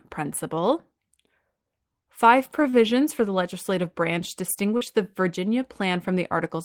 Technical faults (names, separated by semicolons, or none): short stall from a late packet; short concealed packet loss